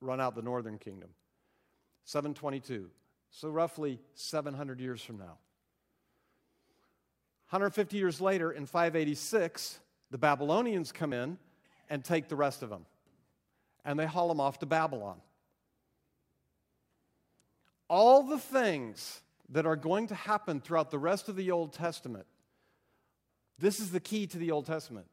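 Speech recording where the recorder likely lost audio between its 4-second chunks, so the sound skips abruptly at 11.12 s and 19.08 s, each gap about 20 ms, joined with no silence between.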